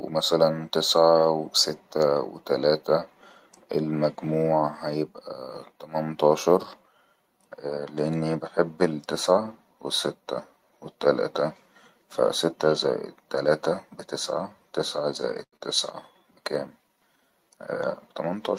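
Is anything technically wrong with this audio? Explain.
Yes. The speech has three timing faults close together near the end.

From 15.43 to 15.56 s, just after "تلاته بتسعه تسعه زائد", there is a short stall from a late packet. A packet missed its slot and the buffer ran dry. The receiver stretched the last sound for 91 ms. Nothing is lost, but the sound hangs with a slight buzz or dip.

From 15.57 to 15.63 s, still before "تسعه بكام", comes a skip ahead. Roughly 70 ms of audio was dropped while later audio was waiting. Playback jumps forward with a near-direct splice. This claws back about 50 ms of the added delay.

From 17.43 to 18.14 s there is a jitter buffer speed-up. The buffer held more than its target, so the receiver cut out many tiny pitch-period slices, about 70 ms in total. Speech runs at 108% speed. The pitch stays the same, but it sounds hurried.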